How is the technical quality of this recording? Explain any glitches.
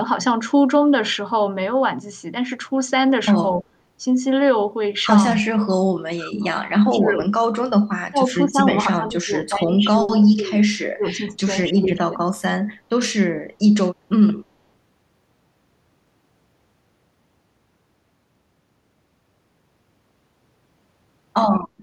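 The speech keeps sinking and breaking up between about 5.4 and 12.3 s: at 5.41, 5.84 to 6.43, 6.83 to 7.28, 8.11 to 8.60, 8.88 to 10.65 and 10.92 to 12.26 s, dropping by up to around 30 dB. This is speech suppressed in double talk, likely an echo canceller muting the near talker along with the echo while the far side spoke.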